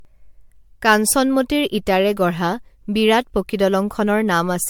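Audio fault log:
Throughout, generation loss: speech sounds swirly and hollow with smeared attacks, likely from about seven MP3 re-encodes near 100 kbit/s; nothing above 19.8 kHz.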